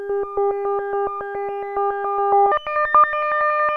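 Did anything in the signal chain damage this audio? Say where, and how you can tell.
Yes. From 2.52 s to the end at 3.76 s there is a wrong sample rate at the playback stage: the samples go to the converter at a faster clock than they were captured at, with no resampling. Everything in that stretch runs 1.5 times faster and sits about 7 semitones higher, with speed and pitch shifting together. That ratio fits audio recorded at 32 kHz being played at 48 kHz.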